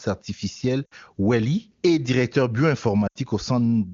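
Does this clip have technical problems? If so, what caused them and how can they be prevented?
Yes. Lost AMR speech frames cause brief drops to near silence at 0.85–0.94 s and 3.07–3.18 s, consistent with three and four corrupted 20 ms frames. The decoder repeated the last good pitch and vocal tract parameters at falling gain, so the speech fades to near silence and comes back weak or rough. Stronger radio coverage, or more channel coding and interleaving on the link, would prevent this.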